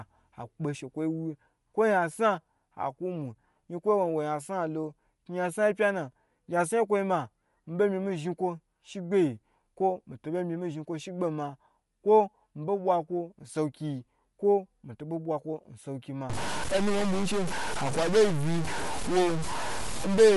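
From the start, the speech carries plainly audible codec damage. Nothing is present above 11.5 kHz. The missing top end and the coded texture point to Bluetooth LC3 compression as the likely cause, with a rate that fits about 48 kbps and 10 ms frames. LC3 is a transform codec. It codes short blocks of spectrum, and at a constrained rate it drops upper detail and fills gaps with noise. That gives the speech its processed, band-limited edge.

At 16.30 s a new distortion begins. It lasts to the end of the clip at 20.37 s. It sounds like a stuck bit, likely from a faulty data line or converter. One bit of every sample is held at a fixed value. About half the samples land off by that bit's weight. This adds noise that follows the waveform. It also leaves noise in the quieter moments, since that bit's correct value changes with the sign of small values.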